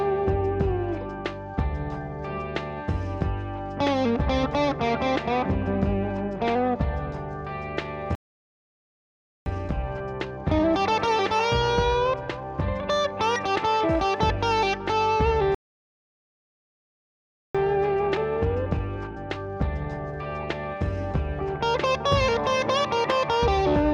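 At 8.15 s the sound cuts out for 1.31 s, and at 15.55 s for 2.0 s. These are playback stalls, likely caused by the player running dry. Unlike a dropout, each gap is a sustained silence mid-flow.

Time-compressed catch-up follows each stall, at 1.25 times speed from 9.46 to 12.46 s and at 1.1 times from 17.55 to 20.55 s. The sound is hurried, but the pitch stays normal, unlike simple speed-up.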